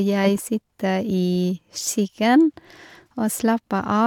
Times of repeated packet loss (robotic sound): none

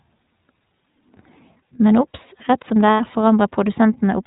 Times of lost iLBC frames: 2.91-3.01

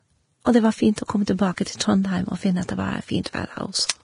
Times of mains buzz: none

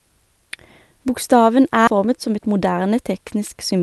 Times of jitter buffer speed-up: 1.97-2.82

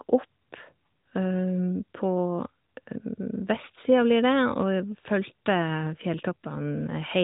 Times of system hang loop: none

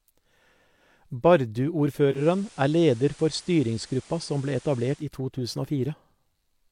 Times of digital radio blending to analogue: 2.08-5.09

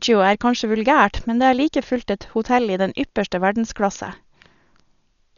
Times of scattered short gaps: none

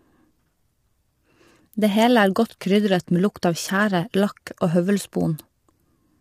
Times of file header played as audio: none

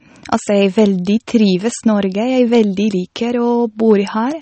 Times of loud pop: none

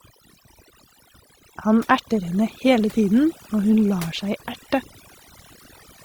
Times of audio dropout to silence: none

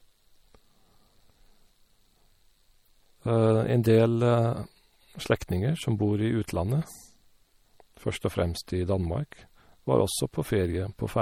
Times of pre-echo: 3.83

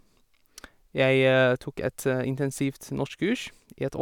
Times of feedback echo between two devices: none

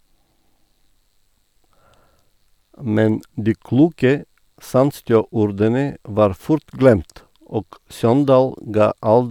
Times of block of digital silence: none

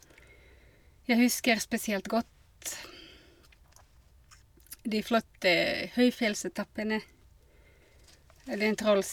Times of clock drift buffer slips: 0.52-8.25

